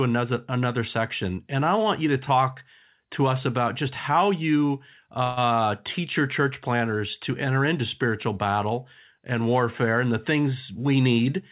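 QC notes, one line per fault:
5.24–5.39 s, call audio freeze: Right after "about just how you", the sound stretches into a fading buzz or hiss for about 130 ms. It then resumes where it stopped. Nothing is lost. A gap is inserted, likely from held-up packets emptying the jitter buffer.
10.71–11.26 s, jitter buffer speed-up: After "and warfare and the", the sound runs about 11% fast at unchanged pitch and feels hurried. The receiver snipped short pitch-period pieces, roughly 70 ms in total, to shrink a swollen buffer, over a band-limited path with nothing above 4 kHz.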